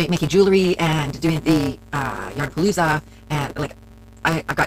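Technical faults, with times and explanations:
Throughout: block size mismatch (truncated). Each block loses its tail before the next stage reads it, so a steady buzz sits at 172 Hz, which fits a 256-sample read block. Playback runs about 1.88 times fast with the timbre kept.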